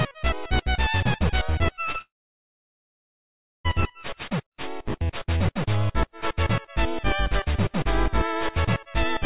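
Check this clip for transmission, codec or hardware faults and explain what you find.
Two kinds of transmission fault are audible, back to back, on audio whose 4 kHz ceiling fits a G.711 mu-law call path at 64 kbps.

Short concealed packet loss, at 1.92 to 1.96 s and again at 1.98 to 2.01 s: twice, about 20 ms of audio failed to reach the decoder in time. Each time the receiver patched the hole by extending the preceding sound, pitched or noise-like, then blended back into real audio. What you hear is a quick smear or wobble, two in close succession.

Long network dropout, from 2.01 to 3.66 s: the second glitch runs straight into a gap of roughly 1.6 s with no incoming audio, most likely a network outage rather than anything local. The receiver briefly continues the last sound as a fading buzz or hiss, then leaves about 1.55 s of silence. The sound resumes at 3.66 s, with everything sent during the gap simply missing.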